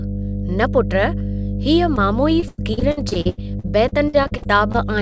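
Mains hum at 50 Hz runs through the whole clip, strong and only a little below the speech, visible as a bright unbroken line near the spectrogram's floor.

From 1.96 to 2.13 s, short concealed packet loss: about 20 ms never arrived and was patched by extending the preceding sound, leaving a brief smear.

Between 2.40 and 4.76 s, repeated packet loss gives choppy sound. Seventeen gaps, the longest 98 ms, were filled by repetition, covering about 28% of the span. The spectrogram shows them as smeared, striped patches.

The spectrum ends sharply at 8 kHz, consistent with a wideband call codec.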